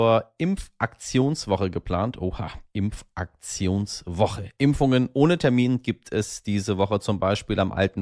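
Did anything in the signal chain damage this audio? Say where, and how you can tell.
No, nothing in this speech recording stood out on listening as damage from any stage of the signal chain.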